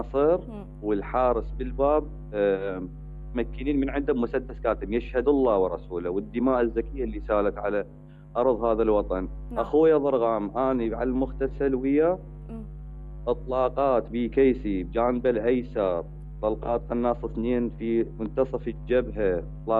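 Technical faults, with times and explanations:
Throughout, channel delay (comb filtering): one channel lags about a tenth of a millisecond, so the mono sum cancels near 5 kHz, sounding hollow.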